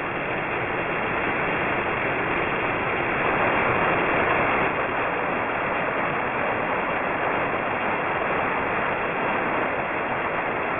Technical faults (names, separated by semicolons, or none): aliasing